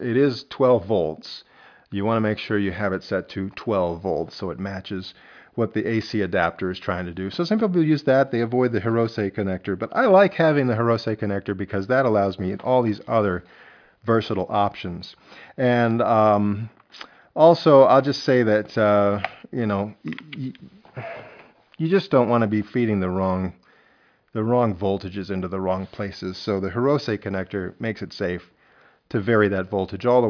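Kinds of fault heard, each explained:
Nothing stood out on listening.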